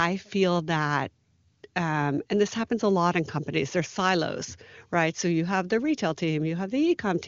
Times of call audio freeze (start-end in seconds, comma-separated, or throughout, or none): none